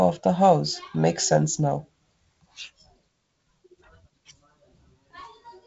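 Nothing stood out on listening to this speech, which comes through G.722 wideband telephone coding with its upper band stopping near 7.7 kHz.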